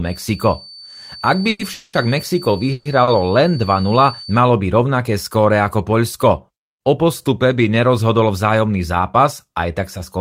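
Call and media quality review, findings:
Feedback whistle, 0.00–4.44 s: thin steady 4.5 kHz tone well below the speech, wavering slightly. Spectrogram shows a narrow horizontal line. Likely an acoustic loop from loudspeaker to mic held just under runaway.

Call audio freeze at 1.49–1.61 s, 1.73–1.95 s and 2.72–2.87 s: fading buzz fills of about 100, 200 and 130 ms with no silence. Speech resumes where it stopped, nothing lost, and delay grows by the fill length. Likely jitter buffer underrun from delayed packets. Waveform shows smeared, decaying repeats.

Short stall from a late packet, 3.03–3.09 s: sound held about 40 ms with a slight buzz. The jitter buffer ran empty for one late packet, then playback resumed intact. It shows as a brief stretched segment in the waveform.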